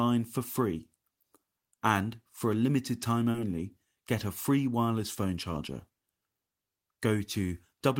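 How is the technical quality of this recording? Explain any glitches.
One glitch stands out in the speech: a short concealed packet loss between 3.31 and 3.37 s. About 20 ms of audio never arrived in time, so the receiver covered roughly 26 ms by extending the preceding sound, continuing its pitch or shaping noise, then crossfading back into the real signal, which stretches things by about 10 ms. It sounds like a brief smear or wobble. On a spectrogram, harmonics run on unnaturally smooth and flat; the waveform shows a repetitive, slightly decaying patch.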